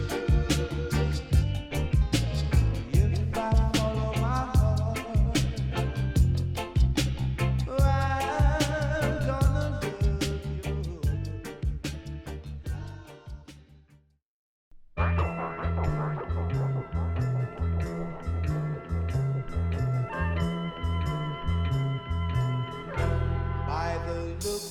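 No technical faults are audible anywhere in the recording.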